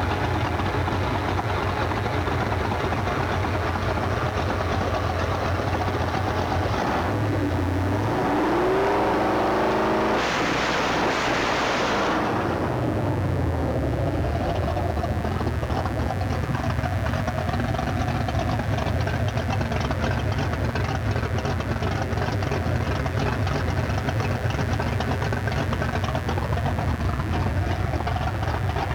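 A mains buzz runs throughout, fairly prominent beneath the sound. Its raspy edge of 60 Hz harmonics, rather than a smooth low hum, points to switching spikes leaking in.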